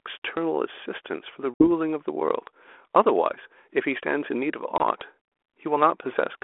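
Packet loss on an ADPCM call silenced about 60 ms at 1.54 to 1.65 s and 20 ms at 4.78 to 4.86 s, leaving the decoder's predictor mismatched. Each abrupt hole is followed by speech returning with brief distortion.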